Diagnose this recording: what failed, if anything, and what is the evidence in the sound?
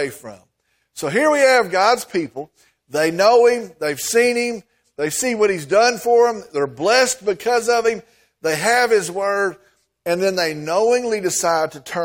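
Nothing failed: listening across the speech reveals no audible defect at any stage, from capture and conversion through transmission to playback.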